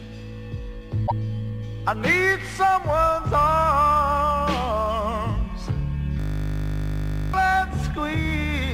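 From 1.03 to 1.12 s, damaged data in the compressed stream corrupts a short run of bytes. The decoder cannot make sense of the frames there, drops out of sync and scans forward for the next valid frame header. What comes out is a brief glitch of roughly 80 ms.

At 6.20 s, a system hang loop sets in. The computer or its audio driver stalls, but the sound hardware keeps playing the same 20 ms stretch of its ring buffer over and over until 7.34 s. Repeating so short a fragment at 50 times per second fuses into a steady, harsh buzz at 50 Hz rather than a distinct stutter. Roughly a second of the real audio is missing when playback recovers.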